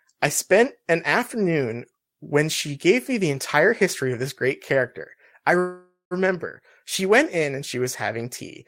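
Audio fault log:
5.59–6.14 s, call audio freeze: packets likely stalled in transit and the jitter buffer ran dry, so the last sound is drawn out as a fading buzz, ending in 140 ms of silence. Speech then resumes where it stopped, nothing lost, but 516 ms late.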